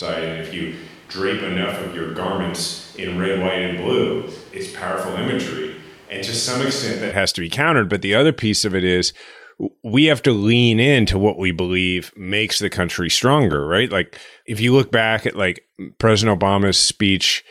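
From the start to 7.1 s, the speech sounds roomy and hollow, thin in the bass, about 5 dB quieter, with more background noise. This is likely a switch to a distant microphone.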